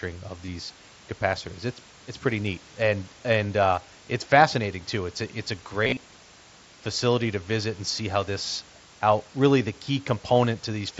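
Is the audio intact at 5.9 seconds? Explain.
No. From 5.85 to 5.97 s there is concealed Bluetooth headset packet loss: about 82 ms of audio goes missing across 120 ms, with runs up to 30 ms. The receiver repeats recent waveform to fill the gaps, giving a brief buzzy tone and a slight warble as real audio resumes.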